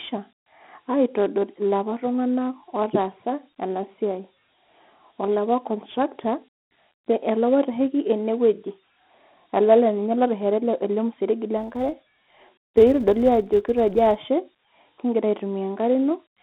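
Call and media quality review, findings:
Dialogic VOX ADPCM, whole clip: gritty, level-tracking hiss riding the speech, plainly audible; band roughly 200 Hz to 3.5 kHz, nothing above 4 kHz. Coarse 4-bit step quantisation, consistent with 32 kbit/s. Spectrogram: hard ceiling, grainy noise floor under formants.

Filter restarted on every block, 11.55 to 14.17 s, after "ninye lotesheta ele museregi": 172 Hz buzz following signal level. The filter starts each block from silence; the buzz rate fits a 256-sample block. Waveform: small regular transients. Spectrogram: evenly spaced vertical striations.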